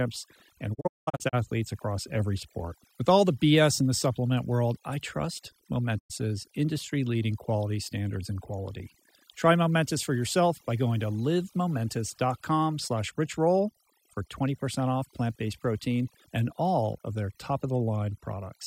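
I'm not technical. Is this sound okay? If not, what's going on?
No. Two things are wrong with it.

The first is overdone noise removal, and it lasts the whole clip. A noise-cleaning tool was turned up too far. It mutes small slices of the sound whenever they look like background hiss, and quiet parts of the voice get cut along with the hiss. So the background drops away and breaks up into twinkling specks.

The second is a digital broadcast dropout, and it happens twice. This is what you hear when a digital radio or TV receiver loses the signal and goes silent until it gets it back. From 0.73 to 1.35 seconds the sound breaks into several short holes. About a third of a second goes missing in total, and the longest gap is about 0.19 seconds. At 5.98 to 6.12 seconds there is one more gap of about a tenth of a second. Each cut fades out quickly rather than snapping off. Whatever was said during those gaps is gone for good.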